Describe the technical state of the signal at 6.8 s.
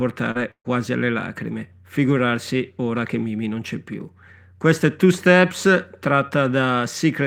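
At 6.8 s the speech signal is intact, with no audible technical fault at that moment.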